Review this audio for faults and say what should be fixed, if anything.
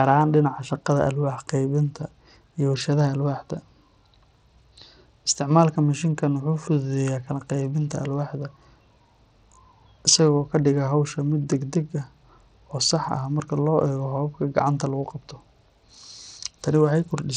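Throughout the clip, a Bluetooth link likely coded the audio with Bluetooth SBC compression at a small bit pool, which fits roughly 80 kbps. The weak upper sub-bands get too few bits, so the treble plainly flickers and drops out, with gritty noise and aliasing riding on the speech. To prevent it, record over a wired connection, or use a higher-quality codec or a larger SBC bit pool.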